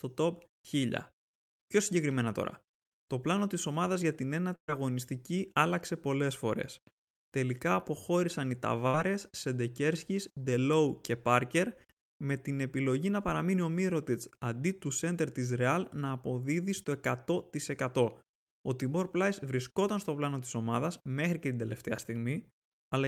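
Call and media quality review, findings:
Burst of packet loss at 4.55–4.80 s and 8.87–8.95 s: receiver concealment stretches the last sound and fades it out, then skips ahead. About 120 ms and 60 ms of speech lost.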